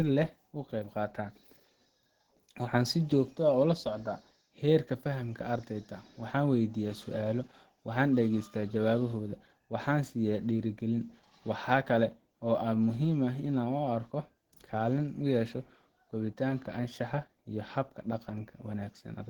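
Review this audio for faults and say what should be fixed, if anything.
Throughout the clip, the speech has likely passed through Opus compression at a very low rate, one that fits roughly 16 kbps with the encoder in its hybrid speech mode. Short of bits, the codec rebuilds much of the upper spectrum by folding lower bands or filling with noise. The bandwidth still reaches about 20.1 kHz, but the speech comes out plainly hoarse and grainy, with a muffled core and a rough, noisy top. To prevent this, encode the speech at a substantially higher Opus bitrate, or keep an uncompressed master.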